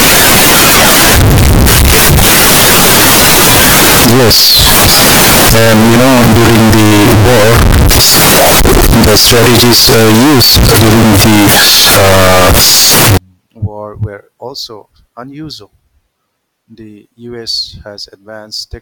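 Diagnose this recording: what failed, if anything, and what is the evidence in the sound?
The sample-format conversion stage failed. From 0 to 13.17 s the speech is extremely loud and harsh, flattened into a near-square waveform at an almost fixed, high level, with background noise as loud as the talker, yet pitch survives. It clears before "war were also unusual". This is likely a float read as integer, with 32-bit float samples interpreted as 32-bit integers.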